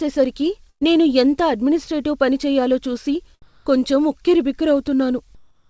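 At 0.70 to 0.83 s, a burst of packet loss drops about 120 ms. The receiver continues the last sound and fades it out, then resumes at "నేను ఎంత అడ్మినిస్ట్రేటివ్ పని" with audio missing. At 3.42 to 3.66 s, just after "అడ్మినిస్ట్రేటివ్ పని చెయ్యాలో చూసి", the background turns into a smooth, featureless hiss at the same level, likely comfort noise in place of the background from the sender's voice detector. The same flat noise returns at 5.35 to 5.69 s, about 3 dB quieter than the real background. Through the call codec, nothing above 8 kHz comes through.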